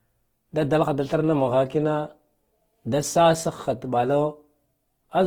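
Throughout, the speech sounds rough and grainy, likely Opus compression near 16 kbps; a spectrogram shows smeared, noise-filled bands reaching 20.1 kHz.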